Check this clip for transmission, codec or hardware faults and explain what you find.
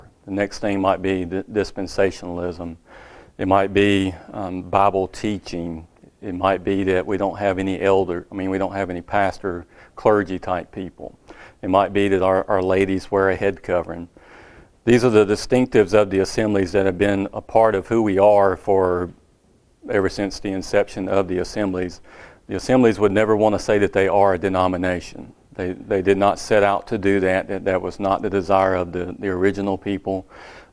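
Nothing in the audio points to a transmission, codec or hardware fault.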